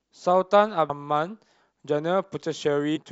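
At 0.88 s and again from 2.95 to 2.98 s the speech is interrupted by damaged data in a compressed stream. Corrupted bytes make the decoder misread those frames and lose sync until it finds a valid header, producing a brief chirp, squawk, click or short hole. A spectrogram shows each as a thin vertical smear or gap breaking the speech harmonics. The waveform shows a short, jagged burst or discontinuity.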